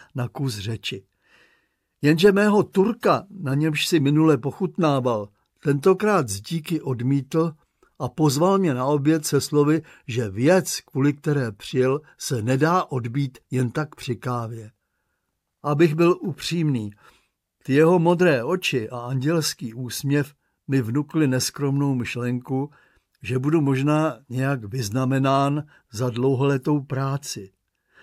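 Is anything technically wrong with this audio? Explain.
Yes, there's one electrical switching spike at about 18.10 s: a sharp snap or tight cluster of clicks lasting just a few milliseconds and peaking fairly modestly, somewhere around -25 dBFS. It's likely a nearby switch or static discharge arcing briefly and being picked up by the audio line.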